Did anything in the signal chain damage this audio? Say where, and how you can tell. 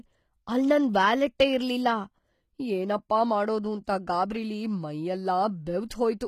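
Yes, at the codec stage, and it runs through the whole speech clip rather than at any one moment. The s sounds come out gritty and metallic, the treble doesn't sit right with the body of the voice, and nothing survives above 14.9 kHz. That points to HE-AAC compression at a low bitrate, likely around 20 kbps: the upper band is synthesised by copying lower bands upward, so its harmonics don't line up.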